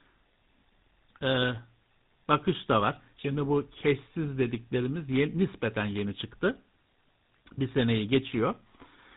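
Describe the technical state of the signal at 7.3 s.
At 7.3 s the speech carries tandem speech coding, present across the whole clip rather than just at this moment. The audio sounds as though it passed through two speech coders in a row, most plausibly an ADPCM stage such as G.726 and then GSM full rate, with a G.711 link between them. Each coder re-encodes the previous one's errors, so the roughness and warble compound beyond what a single narrowband codec would produce. Nothing is heard above about 3.8 kHz.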